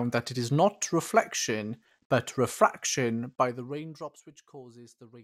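From 3.14 to 4.28 s the speech is pulled down by around 20 dB, and the fade carries zipper noise: a fine ticking buzz riding on the sound while the level falls. The gain moves in small unsmoothed jumps, around a hundred a second, and each jump puts a tiny click into the signal. On a waveform the envelope descends as a fine staircase, and a spectrogram shows faint, evenly spaced vertical broadband lines across that stretch.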